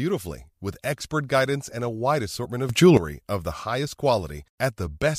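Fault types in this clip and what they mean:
Damaged data in a compressed stream: Some bytes of the encoded speech stream arrived corrupted, so the decoder misread those frames, lost its place and had to hunt for the next valid frame header before it could resume. The result is a brief disturbance in the speech. This happens twice, at 2.44 to 2.46 s and again at 4.86 to 4.88 s, each lasting about 20 ms.
Sudden gain jump: A digital level setting was likely applied in a single step with no ramp, changing the gain from one sample to the next. From 2.69 s the speech and its background noise jump up together by about 13 dB. The raised level holds until 2.97 s, ending just before "of the highest", so that short stretch stands out as noticeably louder than the speech on either side.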